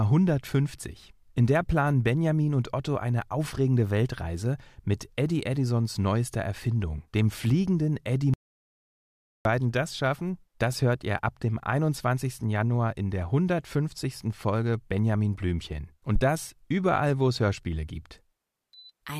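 From 8.34 to 9.45 s the speech drops to dead silence for about 1.11 s, likely an audio dropout to silence; the waveform goes flat, the spectrogram blank, before "das schaffen das hört".

At 16.16 to 16.21 s a phantom power thump, a supply step through coupling capacitors, gives a deep thud decaying in 13 ms; a low-frequency waveform spike precedes "das überall wo es".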